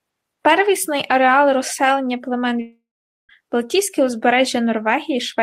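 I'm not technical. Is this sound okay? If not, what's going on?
No, there's a gap in it. From about 2.61 to 3.31 seconds the speech cuts out for roughly two thirds of a second. The last bit of sound gets stretched into a short fading buzz, then there's nearly half a second of silence before the talking picks up again, with that chunk simply missing. This is most likely a long network dropout: the audio stopped arriving for a moment and never got replayed.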